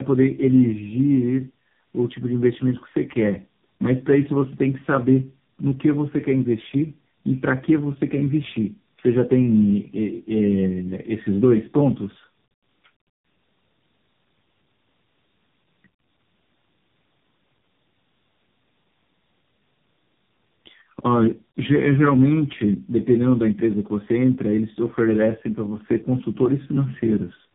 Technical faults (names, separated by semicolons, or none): tandem speech coding